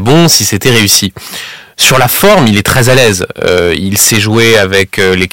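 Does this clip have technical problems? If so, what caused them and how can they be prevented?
Yes. Hard clipping runs throughout. The speech is overdriven by about 17 dB, so about a tenth of the samples hit the ceiling as flat tops. That gives harsh fuzz on loud sounds. To prevent it, lower the input gain or add headroom before conversion.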